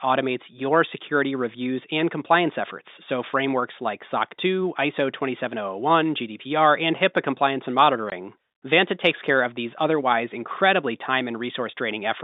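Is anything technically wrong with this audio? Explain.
Yes, there is one fault. Packet loss filled with silence occurs from 8.10 to 8.12 s, a 20 ms gap consistent with a single dropped packet. The receiver had nothing to play and inserted silence, cutting the speech abruptly. On the waveform this appears as a flat line with sharp vertical cuts. On the spectrogram it shows as a thin blank column, standing out against the telephone-band speech of the G.711 line.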